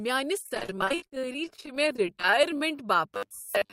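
From 0.40 to 2.61 s the speech turns choppy, with pieces missing. This is repeated packet loss (robotic sound): dozens of short gaps, none longer than about 48 ms, are patched by extending the preceding sound.

Overlapping this, from 1.05 to 2.77 s, the speech drags to about 93% speed at unchanged pitch, with sounds stretched out. That is a jitter buffer slow-down, where repeated pitch periods add about 120 ms to rebuild the reserve.

From 3.15 s to the end, most of the sound becomes a rigid 100 Hz buzz. This is robotic sound from repeated short buffers, likely caused by a 10 ms block replayed while fresh audio is skipped.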